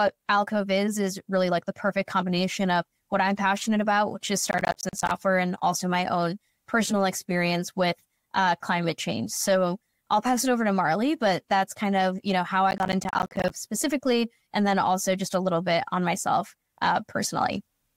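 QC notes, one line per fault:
4.46–5.11 s and 12.71–13.5 s, processor overload crackle: gritty tearing right after "passionate about which is" and "of you know how". The processor kept missing deadlines on short buffers, about 10 ms each, leaving a few dozen hard-edged silent gaps per burst.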